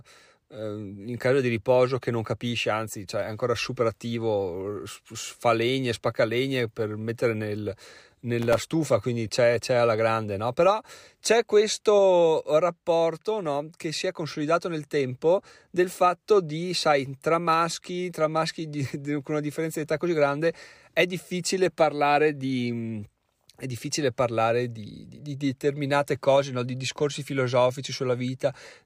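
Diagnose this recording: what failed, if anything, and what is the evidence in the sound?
Processor overload crackle at the driver and buffer stage, from 8.39 to 8.72 s, ending just before "quindi c'è c'è alla". The speech turns gritty and torn for about a third of a second. The processor repeatedly failed to fill its audio buffers in time, and each miss was filled with silence. The tearing rate suggests buffers of roughly a millisecond and a half, with a run of around twenty misses. The waveform shows dense, hard-edged dropouts to near silence, and the spectrogram shows tightly packed vertical broadband stripes.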